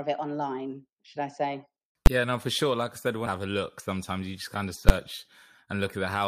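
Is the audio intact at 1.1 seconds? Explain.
Yes, the speech at 1.1 seconds plays through cleanly, with no dropout, click, distortion or other fault at that point.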